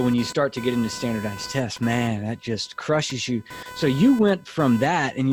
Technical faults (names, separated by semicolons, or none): computer activity noise